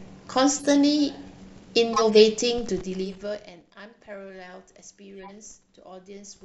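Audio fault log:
0.59–0.73 s, 1.93–2.17 s, 3.05–3.14 s, 5.17–5.32 s: corrupt frame decoded. Four short bursts of chirpy noise cut through the speech. Each spans a handful of codec frames. Damaged data was decoded anyway, so energy lands at wrong frequencies. The loudest burst is around 2 s, the faintest near 5.2 s.
2.55–3.72 s: zipper noise. The level drops by roughly 20 dB in 2 dB steps, about ten per second. Each unsmoothed step adds a small click, so a ticking rides on the speech during the fade.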